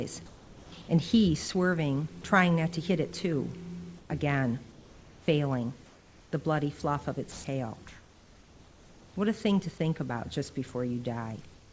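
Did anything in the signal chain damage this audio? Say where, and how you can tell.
Yes. The damage is in call processing, where comfort noise replaces the background. The real background sits about 22 to 29 dB below the loud passages. In the pauses it turns into a steady, featureless noise at 0.26 to 0.72 s, 3.98 to 4.10 s, 4.72 to 5.28 s, 5.86 to 6.32 s, 7.88 to 9.16 s, and 11.54 s to the end. Each stretch is about 3 dB quieter, and the first about 5 dB. Likely cause: discontinuous transmission, with synthetic noise filling the gaps.

There is also sound dropped by the voice detector. At 7.32 to 7.44 s, steady noise takes over for 120 ms, and about 60 ms of real sound is cut. The detector likely judged the sound to be background, so sending stopped and comfort noise was played instead. The call codec passes nothing above 8 kHz, which fits a wideband codec such as G.722.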